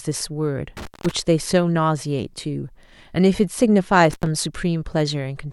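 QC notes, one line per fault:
0.77–1.11 s and 4.10–4.26 s, intermittent contact: the speech cuts out twice, for about 190 ms and then about 95 ms, as a loose plug or cable briefly opens the line. Each gap is framed by scratchy crackle where the contact breaks and remakes, and faint hiss sits underneath while the line is open. That crackle-edged break over a residual noise floor sets it apart from a digital dropout, which falls to clean silence with no crackle.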